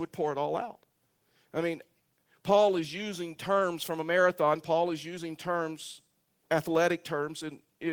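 Speech recording with nothing technically wrong with it. No fault can be heard at any point in the clip.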